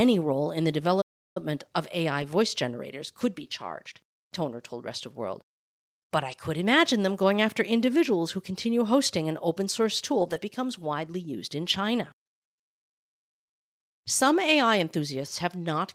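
Right at 1.01 s the sound cuts out and stays silent until about 1.37 s, so roughly a third of a second of dead air in the middle of the speech. That's a playback stall, most likely the player running dry on data or its thread getting blocked, so nothing reached the output until it caught up. When the audio comes back it either picks up where it left off or jumps ahead to a later point.

After that you get a string of short rough patches: 2.22 s, 3.44 s, 6.32 s, a longer stretch from 10.20 to 10.38 s, then 11.74 s and 15.28 s. These are lost packets rebuilt from error correction. Each missing chunk was filled in from the low-bitrate copy carried in the next Opus packet, so there's no gap, just a brief grainier, noisier frame. Most are a single 20 ms blip. The 10.2 s one lasts about 100 ms, which points to a run of five packets.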